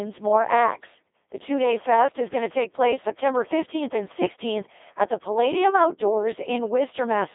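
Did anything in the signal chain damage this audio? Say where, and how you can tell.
Yes. The damage comes from the Codec 2 vocoder at the codec stage, and it runs for the whole clip. The speech is robotic and buzzy, squeezed into a telephone-like band of roughly 300 Hz to 3.6 kHz, with nothing above 3.8 kHz. That fits a very low rate, around 2.4 kbit/s. The vocoder transmits only pitch, voicing, energy and a coarse spectral shape, then rebuilds the speech from sine waves, so the original waveform and its natural texture are gone.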